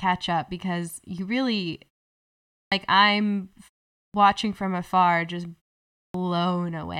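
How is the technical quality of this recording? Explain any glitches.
The recording has one recurring fault: clipped start after a pause, at 2.63 s, 4.05 s (just before "from afar just") and 6.06 s. Each time, the playback device appears to idle during the preceding gap of 0.4 to 0.8 s and needs time to resume, so roughly 83 to 92 ms at the onset is lost. Speech therefore bursts in abruptly, missing its initial sounds.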